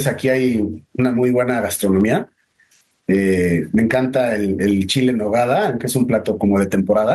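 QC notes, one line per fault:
Throughout, gain pumping: the gain ducks by roughly 20 dB under each loud sound, squashing the dynamics, likely from far too much input gain driving a fast limiter. On the waveform, peaks look flattened.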